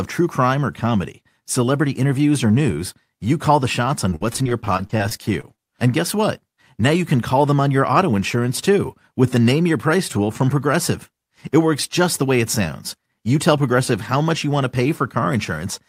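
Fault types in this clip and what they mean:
Repeated packet loss (robotic sound): from 4.09 to 5.60 s, after "you call the shots", a run of dropouts up to 52 ms long is patched by extending the previous sound. About a fifth of that span is filled this way, leaving choppy speech with pieces missing.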